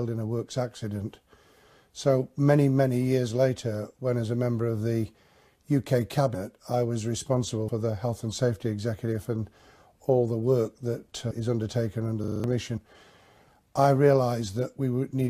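Compressed frames skipped at 6.34, 7.68 and 11.31 s: whole blocks of coded audio never reach the output, so the sound jumps ahead by roughly a tenth of a second or less. The jump sizes fit multiples of a 24 ms frame.

A system hang loop runs from 12.24 to 12.44 s. The playback side froze while the hardware kept replaying its buffer, so one 40 ms slice repeats five times. It is heard as a rapid stutter at 25 Hz, and about 200 ms of audio is lost.

One more compressed-frame skip follows at 12.77 s. It is a shorter jump of about 50 ms.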